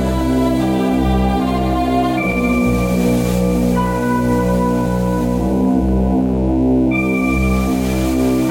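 A mains buzz runs under the music from start to finish: 60 Hz switching spikes leak in, giving a steady raspy buzz roughly 30 dB below the signal.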